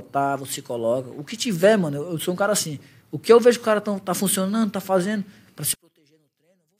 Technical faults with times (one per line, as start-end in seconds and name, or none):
5.74-6.79 one channel inverted